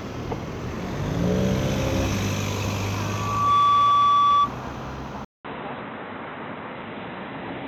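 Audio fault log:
2.93–4.51 s, loudspeaker feedback squeal: a 1.2 kHz tone swells over under a second to roughly 10 dB above the sound. The microphone-loudspeaker loop has excess gain there.
5.25–7.67 s, input switched to a poorer device: after a 200 ms silence, nothing remains above 4 kHz, so the sound turns dull. Faint new hiss appears at an unchanged level, likely from a narrower-band device.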